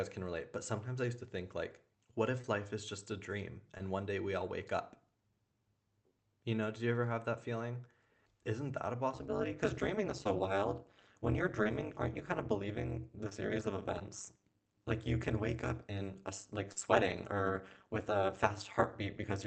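Short concealed packet loss first appears at 2.41 s, between "to think like what" and "life is just a", and again at 3.78 s after "is just a dream". About 20 ms of speech each time never arrived and was patched by extending the preceding sound. The result is a momentary smear or wobble, isolated rather than periodic.

From 9.14 s, just after "that a", to the end, overlap-add ripple sets in. Frames rejoined with uneven overlap gain make the level pulse at around 200 Hz, with a depth of about 60 dB. This is a continuous metallic buzz with extra tones around each note, not a brief glitch. Further concealed losses fall inside this stretch at 10.24, 11.63, 13.29, 13.99 and 16.72 s, the last covering about 40 ms.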